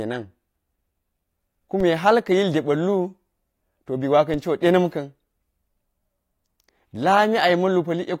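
At 1.80 s and 4.34 s, DC steps jump the waveform's zero line. Each is a low thump and a thin vertical spectrogram line, decaying back through a 20 Hz high-pass.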